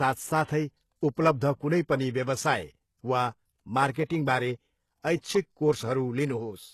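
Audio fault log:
Throughout, HE-AAC compression: treble rebuilt from lower bands, nothing above 12.3 kHz, so s sounds turn gritty and metallic. Likely a low bitrate around 16 kbps.
3.92 to 3.96 s and 4.05 to 4.10 s, pre-echo: a short hiss spreads 37 ms and 50 ms before each attack. Block-wide codec noise fills the quiet gap, softening the onset.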